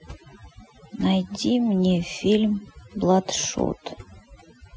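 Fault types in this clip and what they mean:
overdone noise removal: Across the whole clip the background drops and breaks up into twinkling, chirpy specks. This is what happens when a noise reduction stage is pushed too hard: frequency bands close to its noise estimate are pulled far down or switched off entirely, taking the quieter parts of the voice with them and leaving isolated flickering fragments behind.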